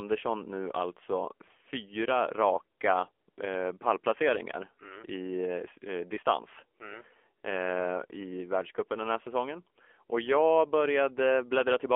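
From start to end, the speech passes through the AMR narrowband mobile codec. Nothing below 300 Hz or above 3.4 kHz survives. A vocal-tract model with sparse pulses rebuilds each frame. The damage is plainly audible: a buzzy, synthetic tone, which fits a low mode around 7.4 kbps.

AMR comfort noise appears briefly at 2.78 s. The phone judged the line silent and stopped sending speech frames. The receiver filled the gap with smooth synthetic noise. It happens again from 3.12 to 3.28 s and from 3.30 to 3.38 s, just before "eh pallplaceringar mm i". There, the real background switches out for a steady hiss.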